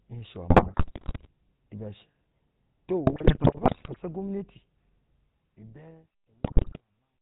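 The whole recording has passed through the GSM full-rate codec, whose rough, band-limited character fits the 13 kbps full-rate stream. The codec rebuilds speech from a vocal-tract filter excited by sparse, regularly spaced pulses, discarding two of every three excitation samples and everything above 4 kHz. The result is a plainly audible buzzy, gravelly texture over the speech, with a dull, boxy top end that lasts from start to finish.

Within that, GSM bit errors strike three times: from 0.50 to 1.27 s, from 3.06 to 4.00 s, and from 6.44 to 6.80 s. Corrupted bits reach the decoder and scramble the filter, pitch and gain parameters frame by frame, so the spectrum twists and the level jumps unpredictably. Each burst breaks the speech into squawks, pops and gargling. The last burst carries the heaviest error rate, about 6% of bits.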